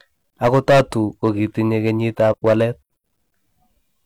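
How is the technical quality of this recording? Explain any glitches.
One glitch stands out in this speech recording. From 2.28 to 2.34 s there is damaged data in the compressed stream: the decoder misreads the corrupted frames and loses sync, producing a brief glitch.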